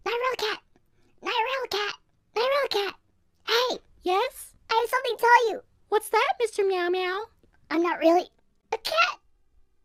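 No technical faults can be heard anywhere in the clip. There is no moment that stands out as a problem, so there are no times to give.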